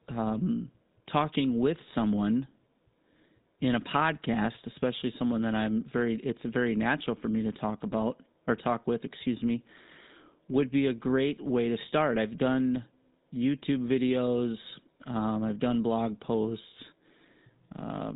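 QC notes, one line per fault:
Throughout, GSM full-rate codec: the speech passes through a vocal-tract model driven by sparse, regularly spaced pulse excitation, which fits the 13 kbps GSM full-rate coder. The result is plainly audible buzzy, gravelly roughness, and nothing above 3.8 kHz survives.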